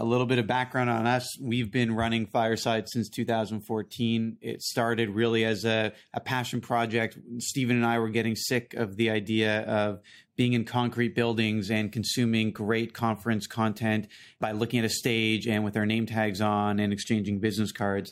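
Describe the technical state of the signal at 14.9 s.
At 14.9 s the speech signal is intact, with no audible technical fault at that moment.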